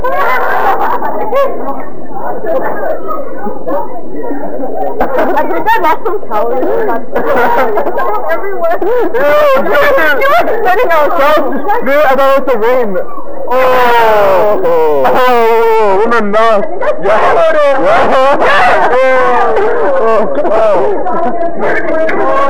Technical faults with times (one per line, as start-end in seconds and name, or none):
0.00-15.75 crude rate conversion